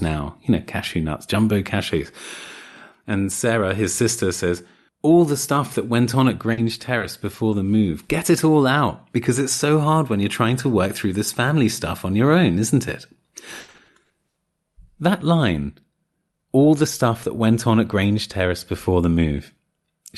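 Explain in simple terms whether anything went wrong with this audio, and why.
Two stretches of this speech have trouble.

Between 6.43 and 7.54 s there are scattered short gaps. About three tiny pieces of sound went missing on the way, the longest around 40 ms. The receiver filled each hole by stretching the sound just before it. You hear brief ticks or small hiccups.

Between 13.60 and 14.38 s there is repeated packet loss, which gives a robotic sound. Eight pieces went missing in under a second, the longest 80 ms. Roughly half of that stretch is patched-in sound, so the speech turns choppy.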